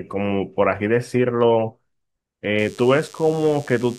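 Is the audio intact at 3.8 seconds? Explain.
No. DECT cordless phone buzz runs from 2.58 s to the end. Radio bursts every 10 ms get rectified, giving a thin, steady 100 Hz buzz well below the speech.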